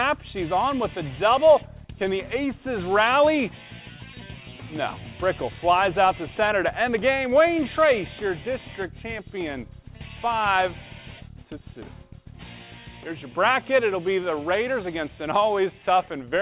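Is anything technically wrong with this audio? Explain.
No, nothing's wrong here: the sound just stops at about 4 kHz, which is what you'd expect from a phone-style call path and fits G.711 mu-law at 64 kbps.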